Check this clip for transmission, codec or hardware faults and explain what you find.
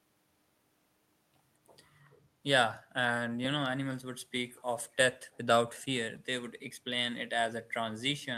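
One fault is audible in this speech. From 4.57 to 4.62 s there is an echo leak: a faint copy of the voice, some 35 dB below it, returns 230 ms late, likely because a far-end loudspeaker echo canceller let residue through. Unlike room reverberation, it is a separate delayed scrap, not a smeared tail.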